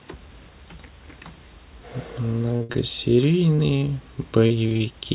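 At 2.57 s a short concealed packet loss removes about 30 ms of the speech. The receiver bridges the gap by carrying the last sound forward for 29 ms and then blending back, which is heard as a brief smear. The same thing happens at 3.56 s (24 ms filled), at 4.47 s (31 ms filled over a stretch to 4.68 s, adding roughly 10 ms) and at 4.77 s (29 ms filled).

Two short stalls from a late packet follow the first loss, at 2.63 s for 61 ms and at 2.72 s for 25 ms. Another comes at 4.69 s for 18 ms. In each one the jitter buffer ran dry and the last sound was stretched until data arrived, so nothing is lost but a sound lingers with a faint buzz. The waveform shows a repeated, slightly sagging cycle, and the spectrogram shows a frozen, smeared band.

All of this comes through the WebRTC call path, which leaves nothing above 4 kHz. That fits G.711 narrowband coding.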